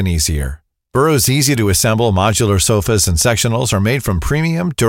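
A speech recording, and nothing is technically wrong with it.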